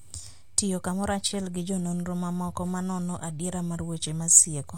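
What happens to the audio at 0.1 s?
Nothing goes wrong at 0.1 s; the audio is intact at that moment, with no dropout, click or other fault.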